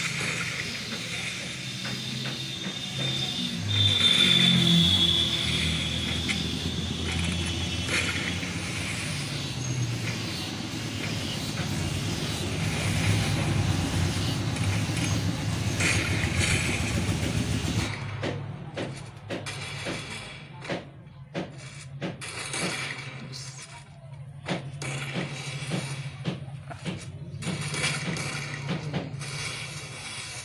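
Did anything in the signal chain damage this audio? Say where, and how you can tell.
No, no stage of the signal chain left audible damage on this audio.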